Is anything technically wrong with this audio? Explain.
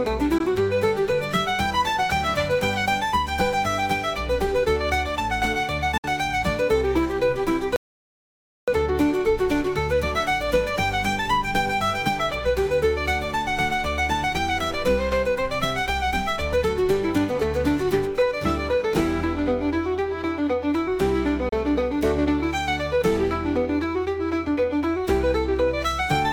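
Yes. Three short holes at 0.38–0.41 s, 5.97–6.04 s and 21.49–21.53 s are likely Bluetooth dropouts: late wireless packets were discarded, leaving gaps of roughly 15, 58 and 29 ms before the sound resumes as though it had played on. A separate audio dropout to silence, likely from a lost input with silence still being written, runs from 7.76 to 8.68 s. That gap is about 0.9 s of total silence with no room tone, far longer than the Bluetooth gaps.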